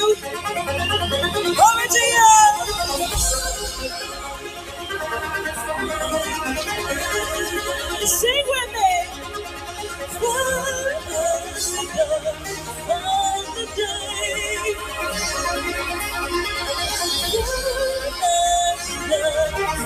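A noise suppressor designed for speech has been left active across the whole clip, and it is treating steady, sustained parts of the sound as noise. Sustained tones and decaying tails are pulled down while sharper onsets pass largely intact, so the level swings by around 10 dB and the audio pumps and thins as the processor engages and releases. The sound cut by the noise suppressor is longest at 4.06–4.9 s and 9.05–10.22 s, each dip lasting about a second, and in shorter dips at 10.99–11.14, 11.4–11.6, 12.33–12.89, 13.46–13.78, 13.97–14.13 and 14.74–14.94 s. In these spans the suppressor has judged the held or fading material to be noise and attenuated it by about 5 to 8 dB. Decays end early and the body of the sound sinks relative to its attacks.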